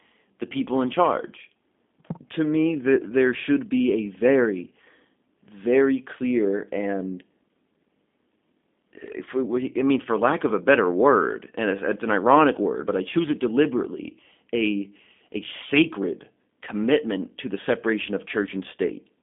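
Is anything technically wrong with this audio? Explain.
Yes. Throughout, the speech carries plainly audible G.729 codec damage, which fits an 8 kbit/s G.729A link. The voice is resynthesised from a vocal tract filter, pitch predictor and sparse pulses, so it sounds rough and synthetic. A spectrogram shows energy confined between 200 Hz and 3.5 kHz.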